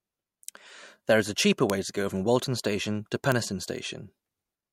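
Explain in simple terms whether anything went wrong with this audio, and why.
Three sharp ticks sit on the speech at 1.70 s after "is a cheaper", at 2.44 s after "to go from", and at 3.32 s. Each is a bit error spike: a single flipped digital bit knocks one or two samples far off, then snaps back. Unlike a dropout, no sound goes missing.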